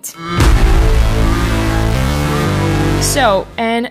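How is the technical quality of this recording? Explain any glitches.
No glitches can be heard anywhere in the recording. The sound continues without any break, jump or added disturbance.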